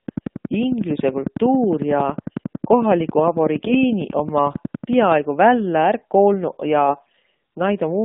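The whole clip of speech runs through the AMR narrowband mobile codec. The band stops near 150 Hz at the bottom and 3.7 kHz at the top, so the sound is thin and boxy. The codec rebuilds the voice from a vocal tract model fed by a few pulses per frame. At this quality it sounds buzzy and synthetic. The damage is plainly audible and fits a low rate of about 7.4 kbps.

From 0.08 s to 5.13 s a train of clicks ticks over the sound. The clicks come at a steady 10.9 per second. That makes about fifty of them, each much the same shape. Their peaks stand about 10 dB above the speech. They carry on through pauses as well as speech. They stop just before "vällä ärq". The likely cause is interference from nearby equipment or a faulty connection or power supply.

AMR bit errors strike twice. The first burst runs from 3.59 s to 3.84 s, inside the clicking stretch. The second, longer one runs from 6.86 s to 7.26 s. 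In both, flipped bits put the driving pulses in the wrong places. The finer pitch, gain and spectrum values go wrong too. Pitch and level roughly hold. The voice turns hoarse, scratchy and gargly. The second burst has the heavier error rate, about 7% of bits against 5%.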